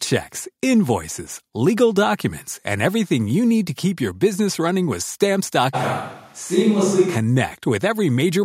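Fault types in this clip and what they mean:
Switch to a distant microphone: from 5.76 to 7.14 s the speech turns abruptly roomy and hollow, with thinner bass, then snaps back. The level barely changes, and room noise sits roughly 35 dB below the speech. The likely cause is a far microphone standing in for the close one.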